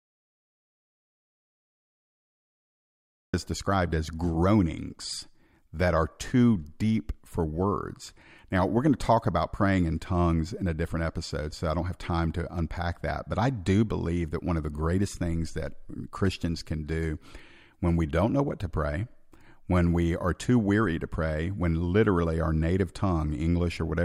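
An audio dropout to silence runs from the very start to 3.34 s: the clip opens in silence, with no room tone, until the speech cuts in mid-flow at "is described as groanings". The input was most likely lost while recording continued writing silence.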